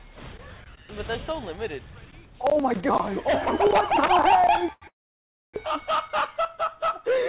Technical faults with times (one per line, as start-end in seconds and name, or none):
3.68-4.11 repeated stalls (stutter)
4.73-4.85 short stall from a late packet
4.88-5.56 call audio freeze